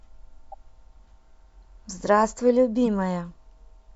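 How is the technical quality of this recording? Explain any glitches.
Two quick glitches stand out. A corrupt frame decoded hits at 0.52 to 0.54 s and again at 2.86 s. Damaged frames got played anyway, throwing energy into the wrong frequencies, so each one is a brief chirpy blip, and the second is noticeably louder.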